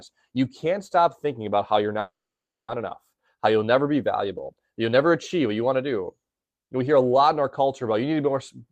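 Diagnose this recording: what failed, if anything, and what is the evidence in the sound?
A call audio freeze interrupts the speech from 1.99 to 2.71 s, right after "thinking about how you're". The last sound is stretched into a brief fading buzz, then about 570 ms of silence, and the speech resumes intact but 690 ms late. This is a network fault, likely packets held up in transit until the jitter buffer ran dry. On a spectrogram, smeared horizontal bands fade into a blank column. The waveform shows a decaying tail and then a flat line.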